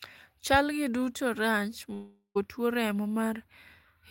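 Speech, cut from 1.93 to 2.37 s by a fading buzzy smear that ends in a brief silence. This is likely a long network dropout, with 0.42 s of audio lost and never replayed.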